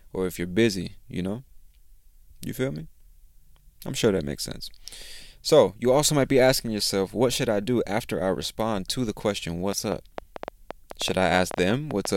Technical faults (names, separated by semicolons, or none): train of clicks